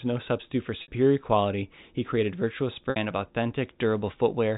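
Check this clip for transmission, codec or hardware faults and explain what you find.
Two dropouts from packet loss with pitch repetition. The 4 kHz telephone band of the G.711 coding is normal and not a fault.

At 0.82 s (after "no substitute for", before "quality he created") and at 2.9 s, about 60 ms is lost each time, consistent with three 20 ms packets. Repeating the last pitch period bridges each gap, heard as a brief buzzy hold. The waveform shows identical repeated cycles, and the spectrogram shows frozen, flat harmonics fading out.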